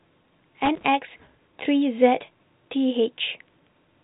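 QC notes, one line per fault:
0.65 to 0.85 s, loose connector crackle: a brief, irregular burst of scratchy crackle lasting about 0.2 s, sitting on top of the speech within the telephone band that stops near 3.8 kHz. It comes from a worn or dirty contact that is disturbed and makes and breaks many times in quick succession. Each break chops the signal off and each remake brings it back abruptly, so the sound is torn into ragged fragments.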